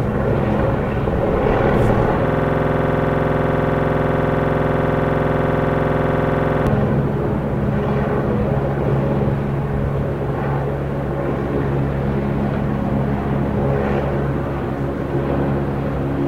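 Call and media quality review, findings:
System hang loop, 2.28 to 6.67 s. One 46.44 ms slice of audio repeats exactly, 95 times, heard as a rapid stutter at 21.5 Hz. Probable component: audio driver or host system. Host froze while the sound hardware kept replaying one ring buffer. Loop length fits a 2048-sample buffer.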